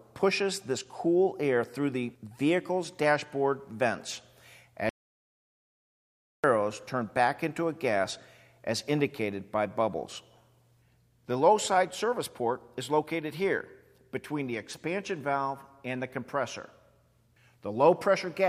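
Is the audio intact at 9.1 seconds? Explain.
Yes, the audio at 9.1 seconds is intact, with no dropout, click, distortion or other fault at that moment.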